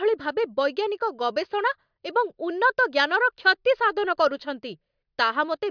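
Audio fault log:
No fault can be heard anywhere in this speech recording. There is nothing here to log.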